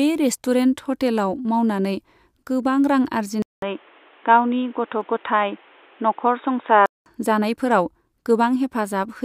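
At 3.42 s the speech cuts out for about 200 ms, then returns dull and boxy, with new background noise roughly 30 dB under the speech. The loudness barely changes. This lasts until 7.06 s, when the full bandwidth comes back. The likely cause is an input switched to a poorer device partway through the recording, a microphone or headset path with a narrower band and its own noise floor.

At 5.01 s, inside that dull stretch, a single sharp click sounds, a thin vertical line across the spectrum. This is likely dropped samples: only a couple of samples are missing, a small fraction of a millisecond, so no sound is lost. But the waveform jumps straight from one value to a later one, and that sudden step is what produces the click.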